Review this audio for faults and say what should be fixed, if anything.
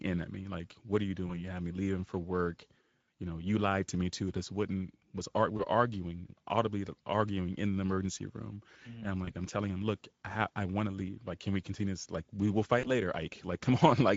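The speech runs through the Speex codec for its full length, at a bitrate of about 17 kbps. This CELP coder spends too few bits on the excitation signal at that rate, so the residual is modelled coarsely. The damage is plainly audible throughout: the voice comes across noisy and hoarse. To prevent it, use a modern codec such as Opus, or raise Speex to a higher quality setting.

VoIP packet loss concealed by the speech codec occurs four times. Each time, packets went missing and the Speex decoder filled the hole by extrapolating from its last pitch and filter state, lowering the gain as it went:

1.27 to 1.44 s, between "what are you" and "had me leaving for"
5.57 to 5.61 s, just before "we're arguing audibly arguing"
9.25 to 9.31 s
12.79 to 12.87 s, right after "we will"

The first three gaps fit a single lost 20 ms frame. The last fits about 40 ms. At each gap the speech is stretched out and fades. 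Because the decoder builds each frame on the previous one, the voice stays weak or distorted for tens of milliseconds after real packets resume, which is why the audible disturbance outlasts the gap itself. To prevent it, add forward error correction or a larger jitter buffer, and fix the network path that is dropping packets.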